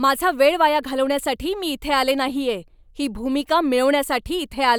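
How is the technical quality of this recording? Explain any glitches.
Listening closely to the speech, nothing stood out as a technical problem or glitch anywhere in the recording.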